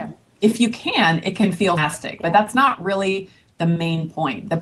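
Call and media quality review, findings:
Skip ahead at 1.77 s: playback jumps forward abruptly, with roughly 400 ms of sound gone and no silence or fill at the join. Jitter buffer likely discarded buffered audio on overflow. Distinct from a dropout, which leaves an audible gap.

Jitter buffer speed-up, 2.41–2.92 s: sound runs about 6% fast, hurried but at unchanged pitch. Receiver trimming short pitch-period segments repeatedly, about 40 ms total, to drain excess buffered delay. Unlike a resampling error, pitch does not rise.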